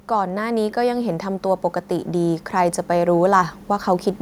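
From 0.08 to 4.15 s, speech and background swell together by about 8 dB. This is automatic gain rising, as the control gradually lifts a too-quiet input.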